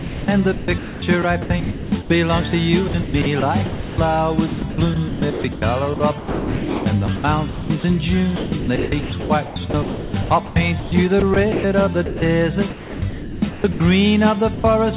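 From the start to 2.1 s, and again at 2.88 to 3.98 s, 4.48 to 7.84 s and 8.36 to 13.8 s, the sound is choppy. Quieter parts keep vanishing into a smooth, synthetic hiss. Within each stretch roughly 0.56 to 2.56 s goes missing. This is likely sound chopped by the voice detector: the sender kept switching transmission on and off and filled the gaps with comfort noise, all within a band that stops at 4 kHz, which fits a G.711 A-law call path.

At 14.54 s a brief 100 ms piece of sound gives way to steady noise before the audio returns. This is likely sound dropped by the voice detector: the sender judged that moment to be background and stopped transmitting, so the receiver played comfort noise in its place until the detector triggered again.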